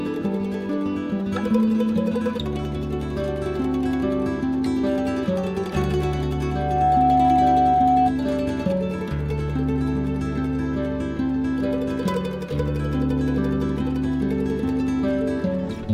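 At 6.33 s a microphone starts picking up the loudspeaker it feeds, and at 739 Hz the gain around that loop rises past one, producing loudspeaker feedback squeal. That single frequency reinforces itself on every pass, so a pure tone near 739 Hz swells over roughly half a second until it sits about 5 dB above the rest of the sound, then holds as a steady squeal until it stops at 8.13 s.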